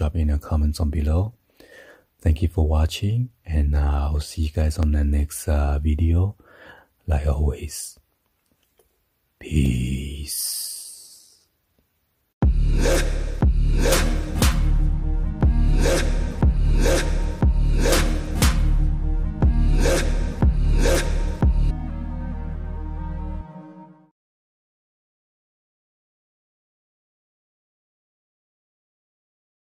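At 4.83 s a block of digital silence lasting about 2.7 ms drops the sound to silence and back with no fade, which fits a 128-sample buffer that went unfilled. It is heard as a tick or dip.

At 21.70 s the sound jumps abruptly forward with a small blip. Unlike the silent block, there is no gap: material is missing and the sound continues later on. This is likely a stream segment skipped, where the player moved straight on to the next segment.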